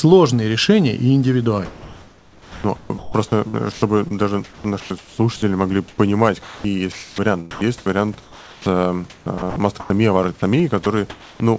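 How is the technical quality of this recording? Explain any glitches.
The recording has glitches: the speech breaks up twice in the middle, and a brief dropout near the end is followed by a patch of artificial-sounding background. The band stops at 8 kHz, which fits a G.722 call path at 64 kbps. The room noise sits about 30 dB below the speech.

From 1.66 to 5.18 s, right after "решения и", and again from 5.88 to 9.90 s, the sound is chopped by the voice detector. The sender likely misjudged quiet parts of the speech as background and switched transmission on and off repeatedly. That replaced roughly 1.96 s in the first stretch and 1.56 s in the second with comfort noise, so the speech stutters. On a spectrogram, the harmonic speech striations break into short flat, smooth noise blocks. On the waveform, the envelope shows abrupt gaps filled with an even hiss.

At 10.84 s the sound is dropped by the voice detector. 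A 20 ms slice was likely judged to be background, so about 10 ms of real sound vanished and synthetic noise took its place before the signal returned. The sound briefly gives way to steady noise. The spectrogram shows a hairline vertical gap where the energy falls to a uniform noise floor, and the waveform shows a sudden narrow dip.

From 10.84 to 11.40 s there is comfort noise in place of the background, covering about 320 ms. With no speech being sent, the receiver synthesised noise shaped roughly like the room noise instead of playing the real background, likely under discontinuous transmission. The hiss turns steady and featureless, without the small textures of the room. A spectrogram shows an unnaturally even, static noise band, and the waveform shows a flat, constant-level envelope.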